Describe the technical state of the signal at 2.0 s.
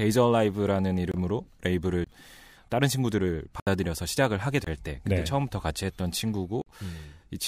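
A brief hole cuts into the speech from 2.04 to 2.07 s, lasting about 23 ms. It is a block of digital silence: the samples drop straight to silence and then resume, with no fade in or out. A gap of this length fits a 1024-sample output buffer that was not filled in time, leaving silence where the speech should be.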